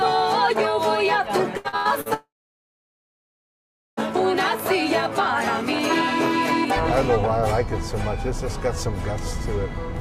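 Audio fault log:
1.57–2.09 s: repeated packet loss (robotic sound). Four short holes, the longest 86 ms, are each patched by stretching the preceding sound, so nearly half this span is synthetic. It sounds choppy, but real audio keeps breaking through between holes, unlike a dropout.
2.14–4.0 s: long network dropout, likely cause. The last sound is briefly carried on as a fading buzz or hiss, then about 1.7 s of silence follows. The missing stretch never returns, and one long hole ending in silence distinguishes it from choppy packet loss.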